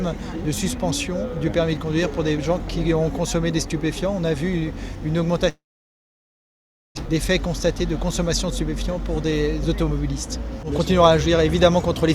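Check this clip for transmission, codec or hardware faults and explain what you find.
Two transmission faults are present.

From 5.49 to 6.99 s there is a long network dropout, likely from packets stopping entirely. The receiver briefly extends the last sound, then about 1.35 s of near silence follows, and roughly 1 s of audio never returns.

From 10.36 to 12.09 s a jitter buffer speed-up trims excess buffered delay by removing pitch-period slices. Playback runs at 110 % speed, about 0.2 s shorter, and sounds hurried at unchanged pitch.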